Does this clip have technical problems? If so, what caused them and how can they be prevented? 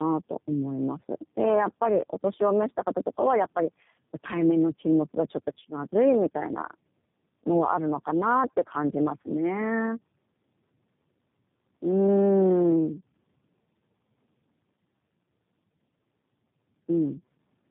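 Yes. Tandem speech coding runs throughout. The sound is rough, muffled and warbly, with nothing above 3.8 kHz, which fits two low-rate speech codecs in a row, such as AMR-NB then G.729A. Keeping a single codec end to end, or passing frames through untouched, prevents it.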